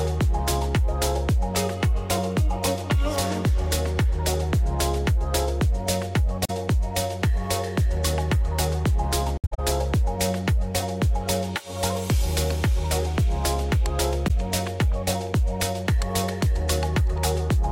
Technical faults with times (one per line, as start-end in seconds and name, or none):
6.45-6.50 AAC frame loss with muting
9.37-9.59 AAC frame loss with muting
14.27-14.31 AAC frame loss with muting